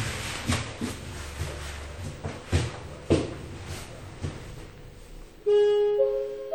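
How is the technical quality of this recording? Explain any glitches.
The recording carries plainly audible codec damage throughout. WMA compression is likely: a ringing, washy smear with hiss that breathes alongside the sound, consistent with roughly 48 kbps. Content still reaches about 20.1 kHz, so the damage is smearing rather than a dull low-pass cutoff.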